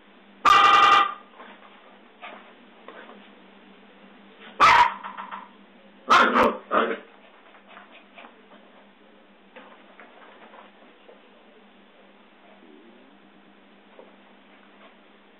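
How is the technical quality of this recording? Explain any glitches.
The recording has two kinds of glitch: short blocks of digital silence and repeated frames. Together they occur six times.

Block of digital silence appears twice, at 0.49 s (10 ms) and 6.43 s (6.3 ms). A run of zero samples replaced the audio. The cause could be an output buffer that was not filled in time, or a calculation that produced invalid values. Both gaps are shorter than about 15 ms, so each is heard as a brief tick or dip in the sound, not as audible silence.

Repeated frames occur four times. From 0.63 to 1.00 s, a 92.9 ms stretch plays four extra times. From 5.03 to 5.45 s, a 139.3 ms stretch plays three extra times. From 9.10 to 9.22 s, a 116.1 ms stretch plays once more. From 13.23 to 13.58 s, a 116.1 ms stretch plays three extra times. In each case a run of compressed frames was written or sent more than once, and the decoder played the same audio again. 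Each one is heard as a stutter. The repeats add about 1.25 s to the clip.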